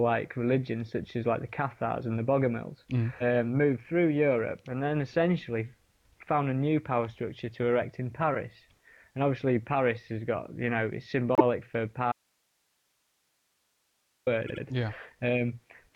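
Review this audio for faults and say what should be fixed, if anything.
Repeated frames occur at 11.35 to 11.43 s, where a 78.4 ms block plays once more, and at 14.46 to 14.62 s, where the same length of block plays twice more. That adds 78 ms and 157 ms, which fits a run of three compressed frames being resent. Unlike a dropout, nothing goes missing: the same fraction of a second repeats as a stutter.

The audio dropout to a faint residue runs from 12.12 to 14.27 s, about 2.1 s. The signal cuts out abruptly, leaving hiss roughly 45 dB below the normal level. The likely cause is the wanted signal being lost while the path after the break stayed live. A natural pause or fade would ease in and out; this gap starts and ends with a hard edge.

To prevent both, check frame sequence numbers so duplicates are dropped, and monitor the input link so that a lost signal is caught and fixed before recording continues.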